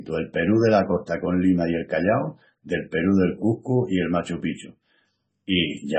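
MP3 compression damages this speech recording throughout, likely from a starved encoder: nothing above 8.3 kHz survives, and heavy swirly, watery artefacts suggest a very low bitrate around 17 kbps.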